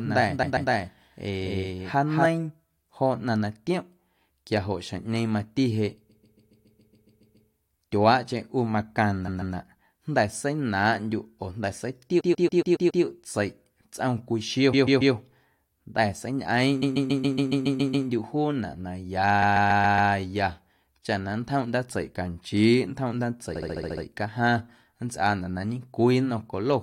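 From the first instant to 2.26 s the speech is heard twice: a second copy at about the same level trails the first by roughly a fifth of a second, clean and full-band with no room colour, then stops abruptly. This is a doubled audio track, most likely the same signal captured again over a slower path and mixed in with the original.

Inside that stretch, from 0.42 to 0.70 s, a short piece of speech stutters, replaying. These are repeated frames: a block of compressed audio about 139 ms long, which fits six codec frames, was delivered more than once, so the decoder played it again and stretched the clip. The same stutter returns at 6.09 to 7.48 s (ten extra plays, adding about 1.4 s), 9.27 to 9.55 s, 12.19 to 13.03 s, 14.72 to 15.14 s just after "cwii xio", 16.81 to 18.07 s, and 19.41 to 20.11 s. At 23.55 to 24.04 s a shorter block of about 70 ms repeats seven times, giving a faster stutter.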